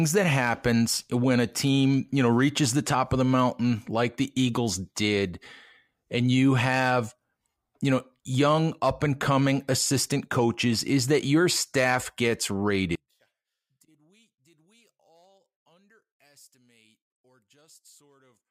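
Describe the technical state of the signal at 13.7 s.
At 13.7 s the speech sits inside a stretch from 12.95 s to 18.51 s where the level falls by about 37 dB and the centred content all but disappears. The likely cause is one channel inverted: with one side's polarity reversed, everything shared equally by left and right cancels when the pair is folded to mono. What survives is only the small difference between channels, a faint residue rather than the full-bodied signal.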